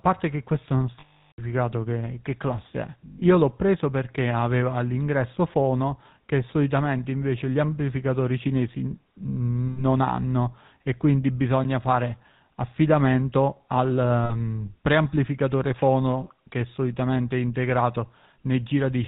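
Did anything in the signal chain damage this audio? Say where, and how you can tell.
Yes. A buzzy, gravelly roughness runs through the whole clip, and the speech has no content above 4 kHz. This comes from the codec stage. The sound fits GSM full-rate coding at 13 kbps. That codec models the vocal tract and drives the model with evenly spaced pulses, keeping only every third excitation sample. The coarse excitation produces the grit, and the narrow passband removes the top end.

Four times the speech freezes into a rough, metallic ring. These are lost GSM frames from the network or transmission stage. The longest runs from 1.0 to 1.4 s, about 380 ms of missing audio, and at that length the ring is cut to silence after about a third of a second. Shorter ones occur at 3.06 to 3.23 s (scattered gaps, the longest around a tenth of a second), 9.68 to 9.84 s, and 14.24 to 14.33 s. In each case the decoder repeated the last good frame's settings.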